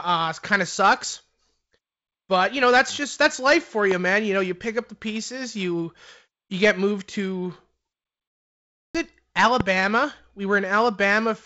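A sudden voltage step, most likely from a switch, static discharge or a driver glitch, enters the signal path at 3.91 to 3.94 s. It comes out as a single loud pop, roughly 15 dB above the surrounding speech, with the speech continuing underneath it. The same kind of loud pop returns at 9.60 to 9.63 s, again a single sharp burst at about the same level.

Between those two pops, at 8.28 s, a playback stall cuts the sound off in mid-flow. The player most likely ran out of buffered data or had its thread blocked. The output goes fully silent for about 0.67 s, and the speech resumes at 8.95 s.

Throughout the clip, the light hiss in the top band and the lack of content above about 7 kHz fit G.722 wideband coding at around 48 kbit/s.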